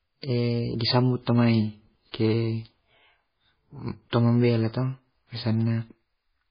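From start to finish the speech carries heavy MP3 compression damage, likely from very low-bitrate encoding; the sound fits something around 16 kbps. Short of bits, the encoder drops everything above 5 kHz, so the top end is simply gone and sibilants lose their bite. Quieter frequency components also flicker in and out between frames, which gives the whole clip a watery, swirly texture, and the consonant onsets come across smeared rather than crisp.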